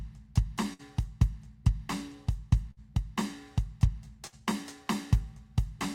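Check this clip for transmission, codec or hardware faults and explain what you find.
Three bursts of packet loss interrupt this music, at 0.73 to 0.82 s, 2.71 to 2.80 s and 4.27 to 4.41 s. Each time a run of packets failed to arrive in time, so the receiver extended the last sound it had for roughly 55 to 60 ms while fading it down. The result is a brief frozen, decaying smear of the preceding tone. The music then resumes about 60 ms further on, with that stretch of the performance missing.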